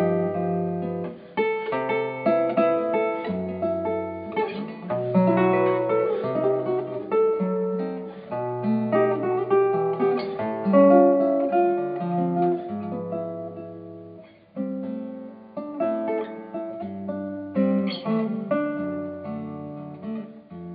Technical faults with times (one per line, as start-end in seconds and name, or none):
none